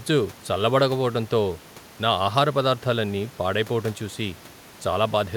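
Nothing technical goes wrong in this bit of speech; there's just a bit of ordinary room noise in the background, sitting about 26 dB below the talking.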